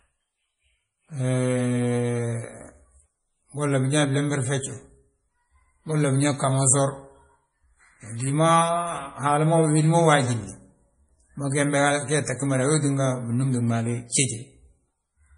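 From start to finish the speech sounds watery and swirly, with a smeared, metallic edge on s sounds and nothing at all above 10.6 kHz. This is heavy MP3 compression, likely at a bitrate that starved the encoder, which fits roughly 32 kbps. Short of bits, it cut the treble at a fixed point and dropped weak frequency lines that then flicker on and off between frames, producing the swirl and blurred consonant onsets.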